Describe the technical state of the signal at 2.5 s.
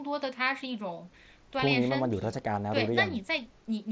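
At 2.5 s the audio is intact, with the sound passing through the call microphone processing and the Bluetooth mSBC headset path as expected and band-limited to 8 kHz.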